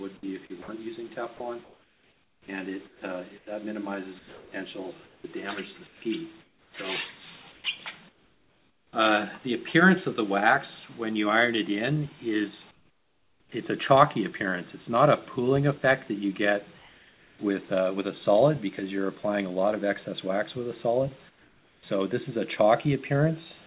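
At 0.21 s the sound starts abruptly, with no soft beginning. This is an onset clipped by the voice detector. About 20 ms of the opening is missing. The sender's detector was likely slow to notice that sound had resumed. So the first instant was never sent, and synthetic noise filled the gap.

From 0.62 to 0.68 s, 60 ms of sound gives way to steady noise and then returns. This is sound dropped by the voice detector. The detector likely mistook this stretch for background and stopped sending. The receiver played noise in its place until the detector triggered again.

Comfort noise replaces the background from 1.64 to 8.93 s, covering about 3 s in total across that span. It returns from 12.71 to 13.52 s, 16.79 to 17.39 s, and 21.29 to 21.83 s. In each gap the real background turns into a flat, featureless hiss. That is likely discontinuous transmission: the sender pauses and the receiver synthesises noise. 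The fill drops in level by about 15 dB at 12.71 s, about 4 dB at 16.79 s and about 8 dB at 21.29 s. The background sits only about 31 to 32 dB below the loudest sound. Across the whole clip nothing is heard above 4 kHz, which fits a narrowband call codec.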